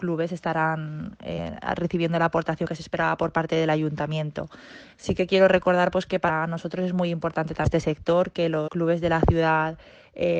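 At 1.34, 2.62, 4.80, 6.25, 7.62 and 8.64 s the audio skips forward. Each is a case of compressed frames skipped. Whole coded frames never reach the output, so playback jumps ahead. The lost stretches are roughly 40 to 200 ms. That fits one to about five frames of 42.7 ms each. The joins blend over about 40 ms. So each skip sounds like a short smeared blip, not a sharp click.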